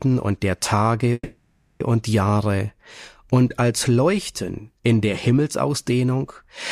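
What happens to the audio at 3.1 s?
Nothing goes wrong at 3.1 s: the audio plays through that moment intact, with no dropout, click or distortion.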